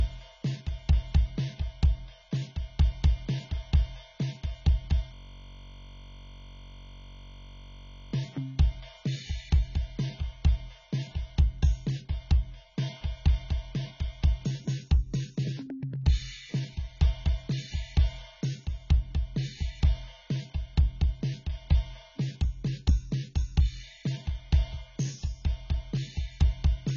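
A music clip that sounds dull and smeared all the way through, with nothing above 7.3 kHz and a warbling, fizzy texture on held tones. That heavy damage most likely comes from AAC compression at a very low bitrate, in the region of 16 kbps. At that rate the encoder lowers its cut-off and leaves gaps in the spectrum that it fills with approximations. From 5.14 to 8.13 s the music gives way to a steady, mechanical buzz at about 46.9 Hz, and the playback then resumes where it left off, with essentially nothing skipped. This is a system hang loop. The machine or its driver stalled while the sound hardware kept replaying the same 21.33 ms slice of its ring buffer, which fits a 1,024-sample buffer. Cycling that short piece over and over for about three seconds produces the buzz.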